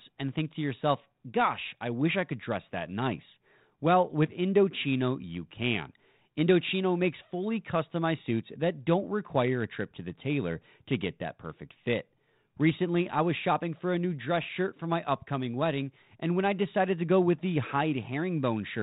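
No technical faults are audible.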